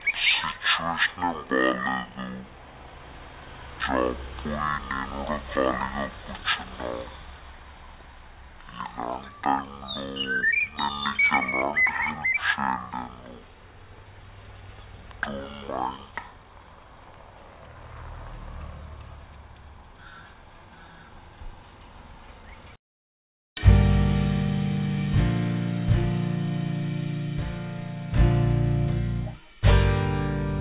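Wrong sample rate throughout: tempo halves and pitch drops an octave together, unlike a pitch shift, which fits 16 kHz audio played at 8 kHz.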